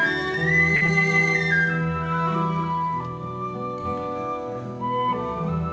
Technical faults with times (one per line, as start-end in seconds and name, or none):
0.76-0.84 short stall from a late packet
0.86-0.90 short concealed packet loss